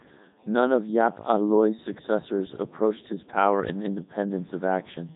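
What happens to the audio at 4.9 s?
At 4.9 s the speech carries Codec 2 vocoder damage, present across the whole clip. Only pitch, voicing, energy and a spectral envelope survive, rebuilt from sine waves. It sounds heavily robotic and buzzy. Nothing sits above 3.8 kHz, and it runs at roughly 3.2 kbit/s.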